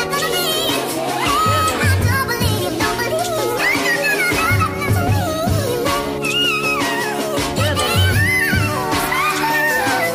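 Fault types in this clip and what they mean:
No audible faults turn up anywhere in this recording.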